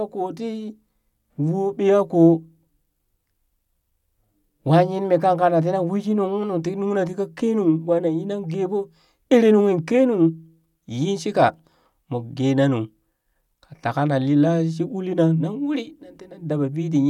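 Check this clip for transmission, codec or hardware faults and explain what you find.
Nothing in the speech recording points to a transmission, codec or hardware fault.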